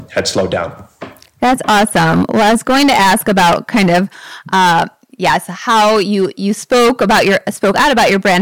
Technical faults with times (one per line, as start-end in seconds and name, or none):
0.00-8.42 hard clipping